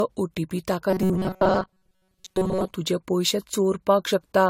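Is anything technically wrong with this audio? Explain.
Yes, there are two faults in this speech clip.

Throughout, generation loss: swirly, hollow, smeared sound with blurred attacks, likely from about four passes of AAC-LC at 64 kbit/s, each adding fresh quantisation noise.

From 0.9 to 2.73 s, robotic sound from repeated short buffers: a rigid metallic buzz at 188 Hz, likely from looping roughly 5 ms chunks while most real audio is skipped.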